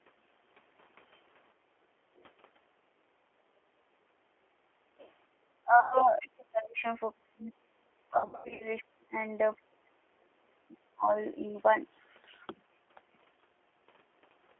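From start to finish the speech runs through the G.729 codec, the 8 kbit/s VoIP coder that rebuilds each short frame from a vocal tract filter, a pitch predictor and a handful of pulses. Here the damage is plainly audible. The sound is confined to a phone band of roughly 300 Hz to 3.4 kHz, with the slightly rough, synthetic edge you get when speech is modelled rather than waveform-coded.

At 1.54 s the background is gated by the echo canceller for about 0.3 s, until 1.85 s. The room tone sinks by about 9 dB and then comes back. The canceller clamped the mic while it thought far-end audio was playing, then released it.

From 5.63 s to 11.1 s the talker keeps dipping and breaking up, sometimes dropping around 40 dB, for about four seconds in total. That's likely speech suppressed in double talk. With both ends talking at once, the canceller couldn't tell the near voice from loudspeaker echo and pushed everything down.

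Inside that stretch, from 5.80 s to 6.03 s, there's VoIP packet loss concealed by the speech codec. About 120 ms went missing, which fits four lost packets. The decoder stretched its last pitch and filter into a buzzy tone or coloured noise that fades, and the voice stays weak for a moment after real audio resumes.

A second, messier loss runs from 8.18 s to 8.69 s. About 300 ms is gone in bits scattered over 420 ms, with the longest gap 90 ms. The result is choppy, with repeated fading fills, and the speech stays weak or distorted for a moment after each gap.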